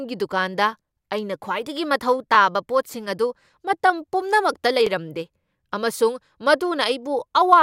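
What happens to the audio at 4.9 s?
Around 4.87 to 4.89 s there's an overlapping-chunks join: the next 2.5 s chunk starts early, so 20 ms of speech repeats, giving a quick click-like stutter.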